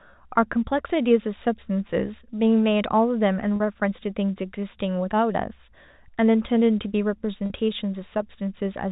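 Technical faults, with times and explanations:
3.56–3.60 s and 7.46–7.50 s, packet loss with pitch repetition: each gap is 40 ms, which fits two 20 ms packets going missing. The receiver loops the last pitch period across the hole, so you get a brief held, slightly buzzy moment over the G.711 telephone band.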